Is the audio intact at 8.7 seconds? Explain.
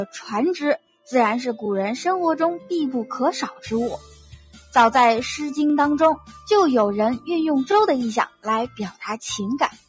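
No. From 8.69 to 9.02 s, sound is cut by the noise suppressor. It mistakes the steady or decaying part for noise and lowers it by up to about 15 dB, for roughly a fifth of a second in total. The level sinks rather than dropping to silence, which is what separates it from a dropout.

This happens inside a broader fault, a noise suppressor applied to music or sounds. The suppressor, built for speech, keeps pushing held material down by roughly 10 dB while letting onsets through. The result is pumping, flutter or thinning, not the smooth change of a deliberate fade.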